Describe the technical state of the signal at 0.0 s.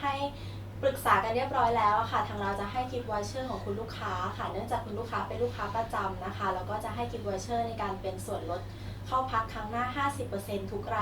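No fault is audible at 0.0 s, where the signal is intact.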